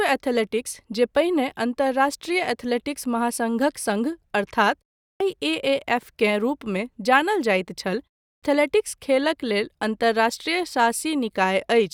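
The output device drops into a sleep state during short silences and needs time to wake, producing a clipped start after a pause. At 5.08 s, after a 0.34 s gap, about 123 ms is swallowed. At 8.31 s, following "जानल जाइत छल" and a 0.31 s gap, about 116 ms is lost. Both times the speech bursts in abruptly without its opening sounds.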